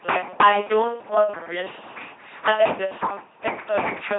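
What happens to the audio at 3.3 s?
At 3.3 s the speech is still under the LPC-10 vocoder, which runs through the whole clip. A pulse or noise source drives a short filter, giving buzzy, robotic sound that fits a 2.4 kbit/s codec. Nothing remains above 3.8 kHz.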